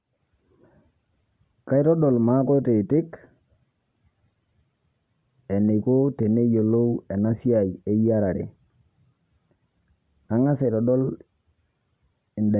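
Listening to the speech recording, nothing stood out as a technical fault at any point.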